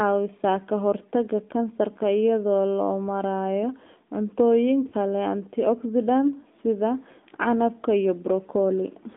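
From start to finish the speech has the sound of the AMR narrowband mobile codec. The band runs only from about 250 Hz up to 3.7 kHz, so it's thin and boxy with no top end. The coder rebuilds the voice from a vocal tract model fed by a handful of pulses, and here that damage is plainly audible as a buzzy, synthetic edge. That degree of coloration fits an upper mode around 10.2 kbps, not the lowest rates.

At 4.88 s there's a short patch of lost AMR speech frames, lasting until about 4.94 s, roughly 40 ms, which matches two 20 ms frames failing their checksum. The decoder covers the gap by repeating the last good pitch and filter settings at falling gain, so you hear a quick dip with a touch of warble rather than a clean cut. Two frames isn't enough for it to fade fully to silence, and the voice picks up again right after, sounding a bit weak or rough for a moment.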